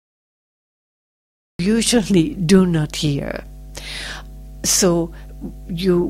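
For the first 1.59 s there is only digital silence, then the sound bursts in mid-event at 1.59 s: a cut-off start, where recording began late. Unlike a gentle fade-in or a brief dropout, nothing came before it and there is no natural attack, just an abrupt onset.

Once the sound appears, mains hum sits underneath it: a steady 50 Hz tone with low harmonics, roughly 20 dB below the sound, from power-line pickup such as a ground loop. It differs from rumble or wind noise by its fixed, unwavering pitch.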